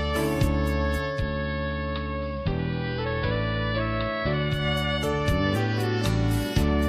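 From 1.04 to 4.67 s, digital radio blending to analogue: the receiver lost digital and cross-faded over 197 ms to AM, dropping about 3 dB, with hiss roughly 30 dB down.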